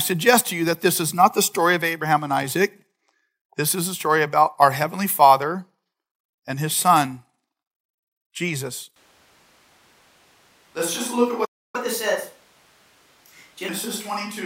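In this speech recording, the close microphone likely dropped out at 8.96 s, leaving a more distant microphone to carry the rest of the clip. That switch to a distant microphone makes the voice abruptly roomy and hollow, with thinner bass, a level about 5 dB lower and room noise rising to roughly 30 dB below the speech, through to the end. At 11.45 s the player likely ran out of data, and this playback stall silences the audio for about 290 ms until 11.76 s, after which it resumes where it stopped. To recover the lost time, the player then runs a catch-up at higher speed from 11.76 s to 13.69 s, resampling at 1.15 times normal speed, so the speech is briefly faster and about two semitones higher before settling back.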